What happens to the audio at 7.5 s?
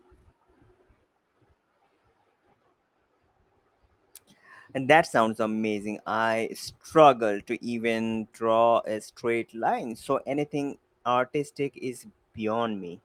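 Nothing goes wrong at 7.5 s; the speech carries on there without any audible dropout, click, distortion or level change.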